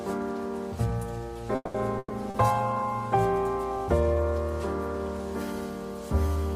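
At 1.55 s the sound stalls for about 0.22 s in a call audio freeze, likely from packets held up in transit until the jitter buffer ran dry. The last sound is stretched into a fading buzz or hiss for 190 ms, with a 20 ms moment of silence. Playback then resumes exactly where it stopped, so nothing is lost and everything after it arrives 190 ms late. That is the difference from packet loss.

From 1.98 to 2.13 s comes a burst of packet loss. Again the last sound is drawn out and faded, with 30 ms going silent. This time 120 ms of audio is genuinely gone, because the sound picks up further along instead of where it broke off. A freeze only delays the audio, but here part of it is skipped.

At 2.1 s a call bitrate drop begins. The encoder falls from 32 to 18 kbps, and for about a second it stays at the lowest rate. The coarser coding makes the sound rougher and more watery until 3.21 s. Unlike the brief dropouts, this is a sustained change in texture, not a break in the audio.

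At 2.30 s, inside that degraded stretch, a short concealed packet loss replaces 40 ms with a continuation of the preceding sound before it blends back in. It is heard as a quick smear or wobble. This gap is far shorter than the earlier burst.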